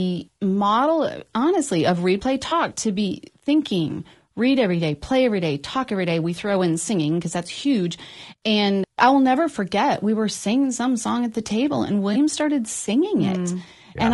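Low-delay AAC compression runs throughout: the speech sounds plainly rough and grainy, with noise filling the gaps between harmonics and a thin, synthetic top band. This is likely AAC-ELD, whose short frames resolve pitch harmonics poorly, and the damage fits a bitrate around 32 kbps.

AAC frame loss with concealment occurs at 2.49 s, between "model honestly of replay" and "to be thinking read", and again at 12.13 s, just after "at the table and". Each time a 20 ms stretch, consistent with one missing frame, is rebuilt from the previous spectrum, leaving a brief smeared, noisy blip.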